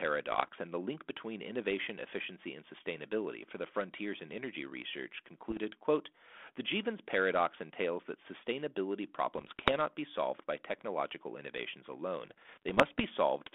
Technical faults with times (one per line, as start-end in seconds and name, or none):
0.31-0.48 bit errors on an ADPCM link
5.50-5.61 bit errors on an ADPCM link
9.35-9.74 bit errors on an ADPCM link
12.26-13.04 bit errors on an ADPCM link